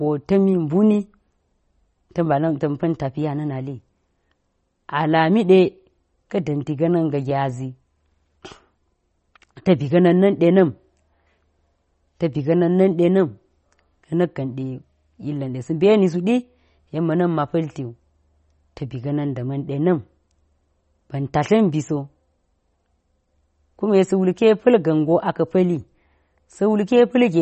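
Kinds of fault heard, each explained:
MP3 compression: speech stops dead at 8.3 kHz and sounds plainly watery and swirling, likely a starved MP3 encoder dropping weak lines, fitting 32 kbps.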